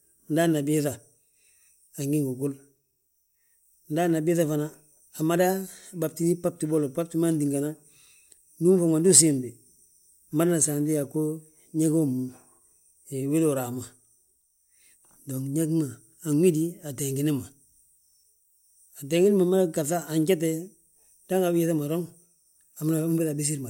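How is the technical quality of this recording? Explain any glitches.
No technical glitches are audible.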